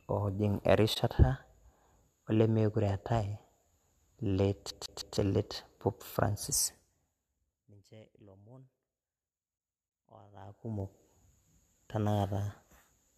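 A speech recording carries three distinct faults. At 0.94 to 0.97 s a corrupt frame was concealed: damaged AAC data was detected in a single frame and the decoder muted or smeared that slice itself. Unlike a raw bit error, there is no squeak or burst. From 4.70 to 5.17 s the sound behaves like a CD stuck on one turn. A scratch keeps sending the laser back to the same spot, so one 0.16 s fragment repeats three times, with a short mute at each jump. That fast, perfectly even stutter separates it from network dropouts, which gap irregularly rather than repeating identical material. Between 10.27 and 10.86 s there is zipper noise. The level changes by about 25 dB in 1 dB jumps, around fifty steps per second, with no smoothing between them, so each step leaves a tiny click and together they form a ticking buzz over the sound. A properly ramped fade moves without any such texture.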